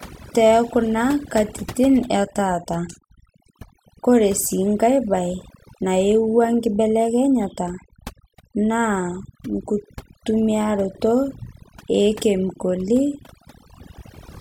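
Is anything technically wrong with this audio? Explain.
Yes. Throughout the speech there is overdone noise removal. A noise reduction process set far too strong is cutting individual frequency bands whenever they sit close to its noise estimate, and the softer parts of the voice fall below that line too. The background drops and breaks up into twinkling specks. A noise gate would instead mute everything at once; here, separate bands flicker independently.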